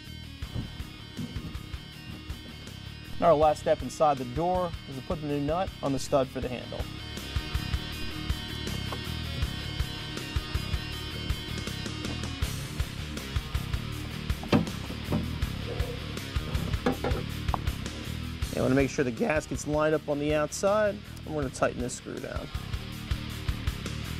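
At 3.13, 5.97 and 8.02 s, DC steps shift the waveform's zero line by about -30 dBFS, each a low thump and a broadband spectrogram stripe, drifting back as a 2 Hz high-pass.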